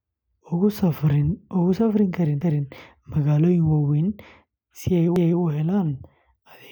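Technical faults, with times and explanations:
2.41–2.66 s and 5.16–5.41 s, overlapping chunks: each new 2.5 s block of the speech begins before the previous one finished, so a 250 ms stretch plays twice at both joins, the second just after "si ay". The result is a brief stutter at the seam. Unlike a dropout, nothing is missing. The sound is duplicated, and the two repeats fall 2.75 s apart.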